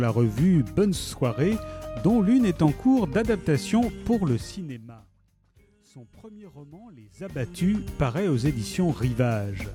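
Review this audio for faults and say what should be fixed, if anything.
No faults; nothing to fix.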